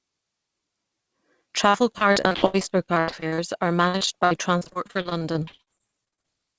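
From 1.70 to 3.40 s, and again from 3.88 to 6.26 s, the speech breaks up with repeated packet loss, giving a robotic sound. Packets keep going missing in quick succession. Each hole is bridged by extending the last sound, and the next hole soon follows. Concealment covers 37% of the first stretch and 30% of the second. The longest gaps are 79 ms and 58 ms. The result is choppy speech with pieces dropped out.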